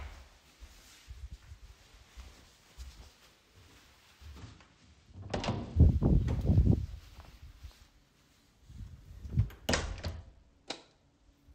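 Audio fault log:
4.39–5.77 s and 9.70–11.37 s, Bluetooth SBC bit pool drop. Twice the treble goes dull and a gritty noise rises under the sound. Then clarity returns. The link briefly lost capacity. The encoder then spent fewer bits on each frame, which fits a bit pool falling from 31 to 11, near 83 kbps. The highest sub-bands got few or no bits, hence the lost brightness. The remaining bands were quantised coarsely, hence the grit.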